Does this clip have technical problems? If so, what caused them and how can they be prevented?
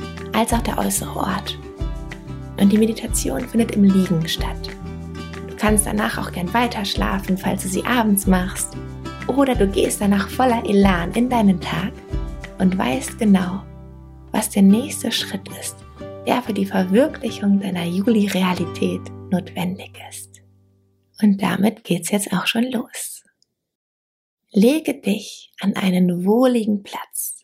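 No, no technical faults here.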